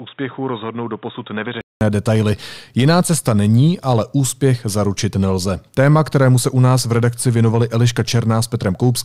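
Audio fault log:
0.00–1.81 s, input switched to a poorer device: the system was likely recording through a lesser microphone or headset call profile for the opening stretch before moving to the proper input. That device passes nothing above 3.8 kHz, so the speech sounds dull and boxy, roughly 10 dB quieter, over its own faint background noise around 40 dB down. A gap of about 200 ms marks the switch at 1.81 s, after which the fuller sound arrives abruptly.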